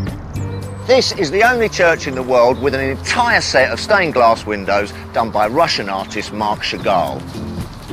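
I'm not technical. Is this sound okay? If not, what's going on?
Yes, it's fine; nothing in it sounds broken or out of place, so there's nothing you need to worry about.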